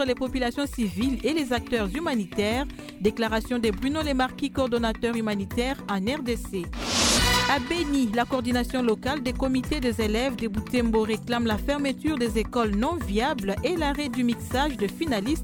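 No technical faults can be heard anywhere in this recording.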